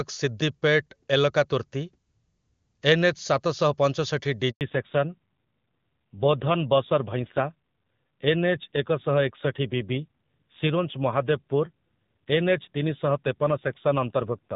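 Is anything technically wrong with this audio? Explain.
Yes, there are two faults, both at the same moment in this speech clip.

Handover gap, 4.51 to 4.61 s, right after "ସାତ ଶହ ପଞ୍ଚଷଠି": the call switched networks and no speech frames got through for 100 ms. The sound fades out within a few tens of milliseconds, and anything spoken during that stretch is lost.

Fallback to narrowband, from 4.61 s to the end: after the switch the call drops from HD Voice to an older narrowband codec. Everything above 4 kHz disappears, and the remaining speech sounds duller and rougher. This fits a move to roughly 7.4 kbit/s AMR-NB, away from the clear wideband AMR-WB heard before 4.5 s.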